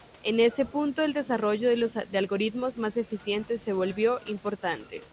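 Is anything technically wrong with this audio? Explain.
No, nothing stood out on listening to this speech, which comes over a G.711 A-law call path with nothing above 4 kHz and has room noise sitting about 31 dB below it.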